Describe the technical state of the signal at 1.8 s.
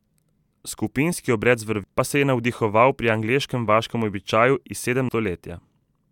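At 1.84 s, between "obred z" and "pa se je navdihoval", there is a single instant of damaged data in the compressed stream. Bytes at that point of the encoded speech were lost or corrupted, so the decoder misreads or rejects the affected frame, loses frame synchronisation and scans forward for the next valid header before it resumes normal output. This is heard as a short chirp or blip in the signal.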